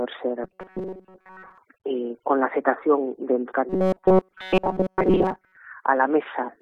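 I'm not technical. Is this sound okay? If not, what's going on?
No. From 0.44 to 1.58 s and 3.69 to 5.57 s there's robotic sound from repeated short buffers: a rigid 188 Hz buzz, likely from tiny repeated audio scraps replacing most real sound.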